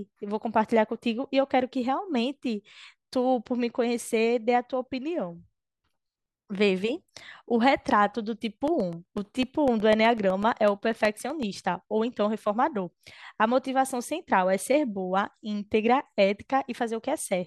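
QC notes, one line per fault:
8.68–11.55 s, periodic USB or driver dropouts: evenly spaced ticks every 0.125 s, around twenty in all, audible only under the speech. Each is a gap of about a millisecond filled with silence, as a recurring bus or driver stall briefly interrupts the stream.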